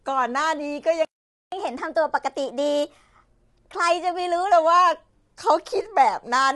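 Throughout the clip the speech sounds rough and grainy, with a hiss-like fill between the harmonics of the voice and nothing at all above 11.5 kHz, so the top end feels shut off. This is plainly audible low-delay AAC compression, likely AAC-ELD of the kind used on video calls, at a rate that fits about 32 kbps. Its very short frames cannot separate closely spaced pitch harmonics, so noise leaks in between them and the bits run out before the highest band.

At 1.05 s the speech stops dead in mid-flow and stays silent until 1.52 s, a gap of about 470 ms. This is a playback stall, where the output had nothing to play for nearly half a second. The likely cause is that the player's buffer ran dry or its playback thread was held up. When sound returns, it picks up rather than skipping cleanly past the gap.

From 1.52 s to 4.52 s the speech runs noticeably quick and high, as if slightly chipmunked, before settling back to its normal pace and pitch. 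This is catch-up at higher speed. To win back the time lost in the stall, the player resamples its backlog at 1.15 times normal speed, which shortens the audio and lifts its pitch by about two semitones for those three seconds.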